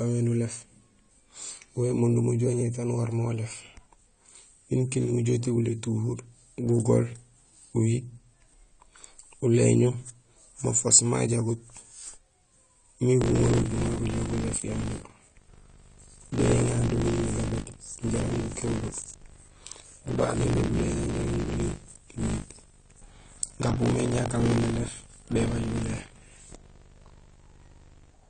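From the start, the speech is dull and smeared, with nothing above 9 kHz and a warbling, fizzy texture on sibilants and held sounds. The likely cause is AAC compression at a low bitrate, consistent with AAC-LC around 32 kbps. The codec cuts the top band and quantises the remaining spectrum coarsely, leaving holes. Plain low-pass filtering would sound dull but clean, whereas here the warble shows codec damage.

From 13.2 s to the end, buffer tearing adds a robotic 50 Hz buzz, which points to a buffer period of about 20 ms. The writing and reading positions have drifted and now cross in every period, so roughly a fifth of each one replays audio about 40 ms old, with hard joins on both sides. Mains hum at the same pitch would continue through pauses, but this rattle disappears whenever the speech stops.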